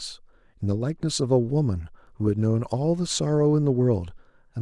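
No technical faults can be heard anywhere in this speech recording. There is nothing to place in time order, since no point in the audio calls for a timestamp.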